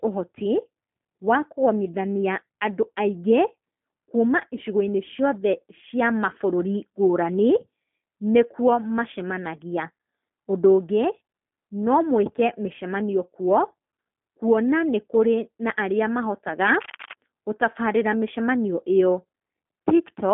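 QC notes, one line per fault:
Throughout: G.729 codec. The sound is rebuilt from a vocal tract filter, a pitch predictor and a few pulses per short frame, not sent as a waveform. The bandwidth fits an 8 kbit/s codec. The band runs from about 150 Hz to 3.4 kHz, and nothing passes above 3.5 kHz. So the speech sounds narrow and muffled. The damage is plainly audible as a rough, slightly synthetic edge on the speech.
16.60–17.13 s: cable scratch noise. Just after "na arĩa", a dense, uneven burst of scratching and rustling sits over the speech for about half a second. It is only a little quieter than the speech. The likely cause is a worn cable, connector or control being moved. Its contact resistance then changes rapidly, and those jumps reach the signal as irregular crackle.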